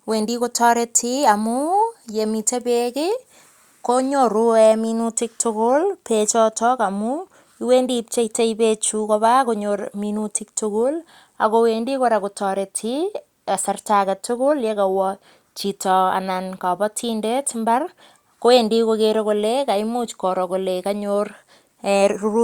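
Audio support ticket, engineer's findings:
Nothing stood out on listening to this speech recording.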